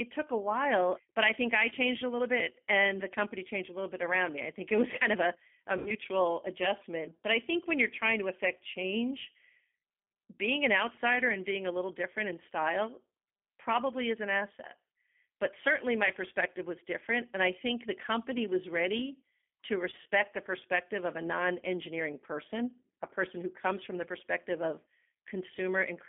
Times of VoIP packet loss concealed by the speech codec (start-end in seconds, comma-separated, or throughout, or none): 5.78-5.92, 19.90-20.07